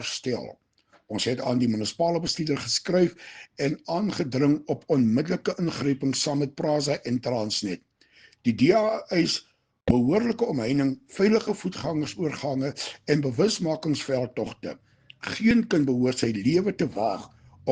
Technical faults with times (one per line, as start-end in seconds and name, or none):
5.53 overlap between stream segments
7.52 overlap between stream segments
15.51 overlap between stream segments